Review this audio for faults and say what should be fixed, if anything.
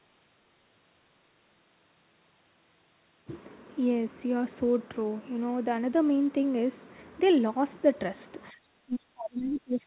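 From 8.51 s to the end, the speech sinks by as much as around 30 dB, likely speech suppressed in double talk: the echo canceller turned the talker down along with the far-end echo. The waveform envelope collapses, and the spectrogram thins below the 4 kHz ceiling of the G.711 A-law path. Tuning double-talk detection so near-end speech is not suppressed would prevent this.

Short bursts of the other side's voice leak through at 9.37 s and 9.73 s, each about 50 to 60 ms and about 35 dB below the speech. The echo canceller likely did not fully remove the loudspeaker signal. They show as faint, isolated patches on the spectrogram. Better echo-path adaptation or a headset would stop the leakage.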